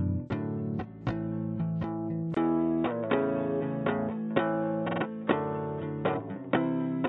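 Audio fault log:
2.35 s to end, input switched to a poorer device: a 20 ms gap, then everything above 3.8 kHz vanishes, so the sound turns dull and boxy, with a level shift of around 5 dB and faint new background noise. The likely cause is the recording input moving to a narrower-band microphone or headset call profile.
4.86 to 4.99 s, repeated frames: one 46.4 ms block plays three extra times, heard as a rapid stutter. This fits a single compressed frame being resent, and adds about 139 ms.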